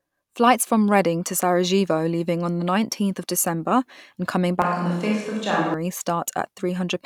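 From 4.62 to 5.74 s the speech abruptly turns roomy and hollow, thinner in the bass, with room noise roughly 35 dB below it, then snaps back. This is likely a switch to a distant microphone. The level barely changes, but the sudden room noise and clean edges point to a microphone swap rather than added reverb or an EQ change.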